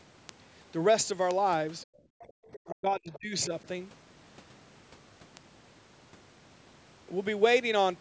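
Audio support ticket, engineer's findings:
Word clock ticks, 0.12 to 7.91 s: sharp, uneven ticks roughly every 0.15 s, about fifty in all. Digital link read on an unlocked clock; a drift of around 150 ppm slips one sample per tick.

Speech suppressed in double talk, 1.84 to 2.02 s and 2.67 to 3.52 s: talker dips about 25 dB, then about 30 dB. Likely the echo canceller ducking both sides while the far end talks.

Background gated by the echo canceller, 2.32 to 2.39 s: room tone drops about 40 dB for roughly 70 ms, then comes back. Canceller clamping the mic hard while the loudspeaker plays.

Other side's voice leaking through at 2.53 to 2.59 s, 3.13 to 3.19 s and 3.41 to 3.46 s: scraps of a second voice about 20 to 25 dB under the talker. Likely residual loudspeaker echo the canceller missed.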